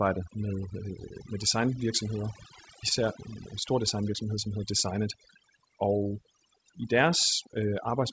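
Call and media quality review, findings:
Call and media quality review, findings:

Overdone noise removal, whole clip. Suppressor set too aggressive, pulling individual bands to near zero wherever they sit near its noise estimate. Background drops and breaks up into twinkling specks; quiet speech components vanish.

Clock drift between sender and receiver, whole clip. Sender clock runs roughly 4% fast, so the jitter buffer keeps overfilling. Result is small, unevenly spaced timing hiccups. Band limit at 8 kHz is consistent with a G.722 path near 64 kbps.

Repeated timing corrections, 0.03 to 7.93 s. Receiver repeatedly trims short segments to catch up with the fast sender, playing at roughly 104% speed. All edits go the same direction at irregular spacing. Heard, if at all, as slight skips and an unsteady tempo.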